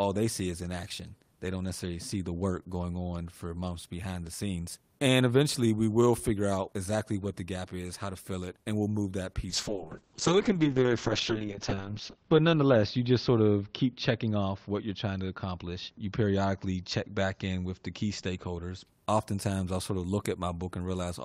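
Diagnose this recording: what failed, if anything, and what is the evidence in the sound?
From 9.5 s to 18.91 s the speech loses everything above 8 kHz, down from about 20 kHz, and turns muffled and more coarsely coded, staying at its poorest for about 2.7 s before clearing by 18.91 s. This is a call bitrate drop in the call processing and codec stage. The bandwidth estimate fell and the encoder was held to far fewer bits, a fall that fits roughly 32 kbps down to 7 kbps, so it coded less finely and trimmed the top band.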